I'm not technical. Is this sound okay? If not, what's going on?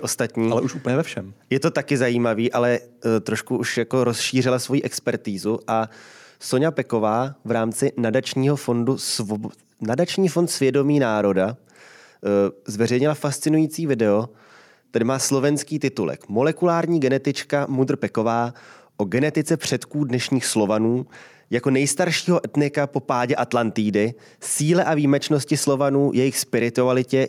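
Yes, this speech recording sounds okay. Nothing in it points to a technical problem.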